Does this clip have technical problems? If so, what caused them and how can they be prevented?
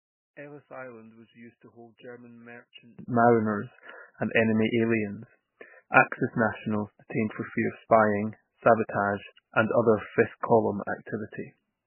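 Yes. MP3 compression damage runs throughout. Nothing survives above 3 kHz, and the speech sounds watery, which fits a very low bitrate, likely around 9 kbps. Encode at a higher bitrate to prevent it.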